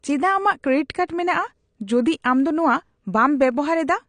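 Speech throughout sounds dull and smeared, with nothing above 9.8 kHz, likely from AAC compression at a low bitrate around 32 kbps; a spectrogram shows a flat ceiling and patchy gaps. At 1.08 s, pre-echo puts a short hiss of about 13 ms before an attack, seen as a smear ahead of the onset.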